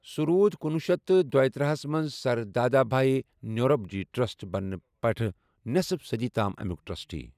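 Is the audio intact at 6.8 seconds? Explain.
Yes, at 6.8 seconds the speech plays through intact, with no dropout, click, distortion or other fault audible at that moment.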